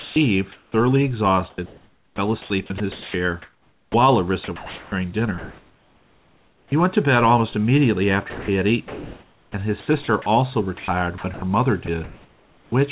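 Sound chopped by the voice detector at 0.0–0.74, 1.5–3.94, 4.44–6.72, 8.3–10.26 and 10.78–12.72 s: between 0.38 and 1.74 s of speech per span gives way to steady comfort noise, likely from the sender's detector misjudging quieter passages. Unlike packet loss, these gaps hold smooth synthetic hiss rather than silence or warbling repeats.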